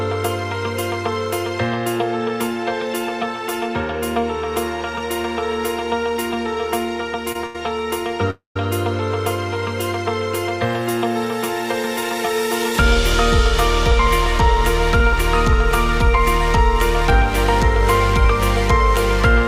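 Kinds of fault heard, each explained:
Short stall from a late packet: A packet was late, so the jitter buffer ran dry and the receiver held the last sound until it arrived. It happens twice, close together. At 7.32 s about 26 ms is stretched. At 7.46 s to 7.56 s the hold lasts about 86 ms. Each sounds like a brief smear with a faint buzz or dip. Nothing is lost. Playback simply resumes slightly later each time.
Call audio freeze: From 8.30 s to 8.56 s the audio halts for about 251 ms. The last sound is carried on briefly as a fading buzz or hiss, then about 140 ms of that stretch is silent. Afterwards the audio picks up exactly where it stopped, with nothing missing. A gap has been inserted, pushing everything later by about 251 ms. This likely comes from packets being held up in transit, leaving the jitter buffer empty.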